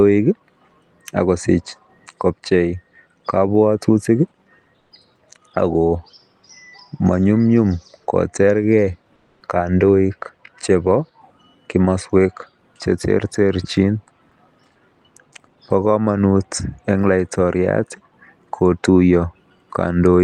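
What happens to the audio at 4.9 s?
Right after "akosich kobchei kabwatutik", from 4.79 to 4.91 s, the real background is replaced by comfort noise for 120 ms, likely because Opus DTX stopped transmission in the pause and the receiver filled the gap with synthetic noise. The background, about 47 dB below the loudest sound, turns steady and featureless and drops by about 2 dB. On a spectrogram the textured floor becomes a smooth, uniform band; the waveform shows a slightly lower, even noise floor.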